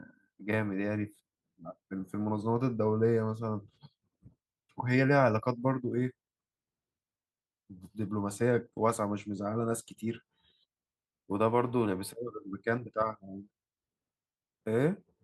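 No technical faults can be heard anywhere in this speech recording. Nothing breaks in at any point to interrupt or distort the sound.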